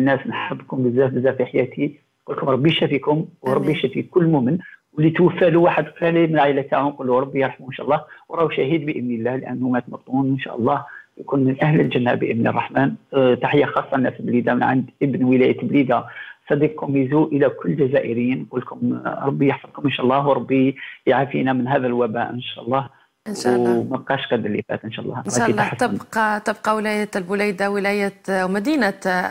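No technical fault can be heard anywhere in this audio. There is nothing here that calls for a time, a value or a cause.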